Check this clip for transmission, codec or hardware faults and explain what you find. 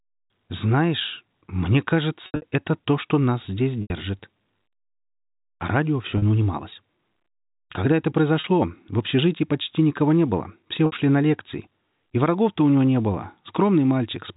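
The speech has one recurring transmission fault. Packet loss with pitch repetition occurs at 2.26 to 2.42 s (about 140 ms lost in bursts up to 80 ms, just before "это то что нас"), 3.82 to 3.90 s (after "то что нас здесь"), 6.18 to 6.22 s, 8.40 to 8.44 s, and 10.86 to 10.92 s (between "никого не было все" and "на лекции"). Each gap is bridged by looping the last pitch period, which is heard as a brief held, buzzy tone; in the longer gaps it fades to silence before the speech cross-fades back in. The gap lengths fit 20 ms packets. The G.711 telephone band tops out at 4 kHz.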